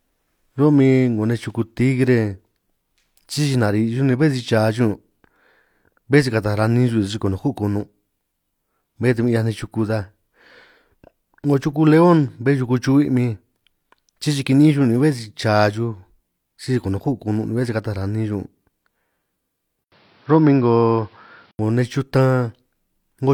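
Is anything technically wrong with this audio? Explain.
Yes. From 19.84 to 21.59 s the input likely switched to a poorer device. After an 80 ms gap, its narrower band cuts everything above 5.8 kHz and adds new noise.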